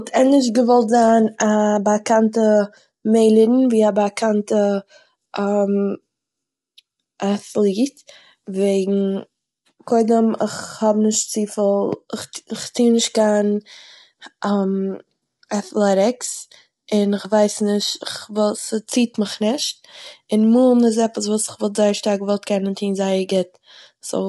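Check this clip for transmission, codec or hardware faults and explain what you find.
One fault runs through the whole clip: low-delay AAC compression, and the damage is plainly audible. The speech sounds rough and grainy, with noise filling the gaps between harmonics, and nothing is present above 11.6 kHz. The likely cause is AAC-ELD, whose short frames resolve pitch harmonics poorly, at a bitrate around 32 kbps. Unlike standard AAC, the artefacts are graininess rather than swirling, and the 11.6 kHz ceiling is far higher than a telephone band's.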